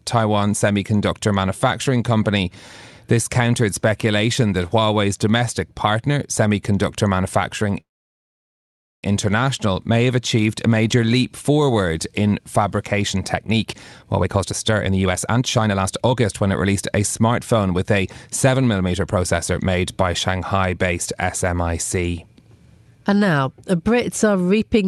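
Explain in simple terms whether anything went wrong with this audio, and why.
At 7.80 s the sound stops for about 1.2 seconds, mostly silence, and resumes at 9.04 s. This is a call audio freeze. Likely the packets carrying the sound were held up on the way, so the receiver ran out of audio to play. When they arrived, playback continued from where it stopped. Nothing is lost, but the rest of the call now runs about 1.2 seconds later.

From 13.16 s to 17.79 s the sound plays about 24% faster, with no change in pitch. This is a jitter buffer speed-up. The receiver was holding more audio than it wanted. To catch up, it cut out many tiny slices, roughly a second in total. It does a smaller catch-up from 18.47 s to 19.54 s, about 9% faster, removing roughly a tenth of a second. Both stretches sound rushed.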